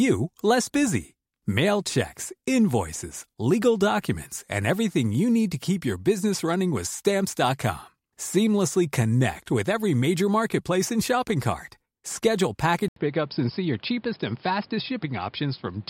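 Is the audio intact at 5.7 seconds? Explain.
Yes, the speech at 5.7 seconds plays through intact, with no dropout, click or distortion at that point.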